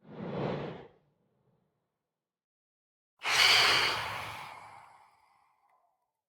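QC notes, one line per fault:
Nothing stood out on listening.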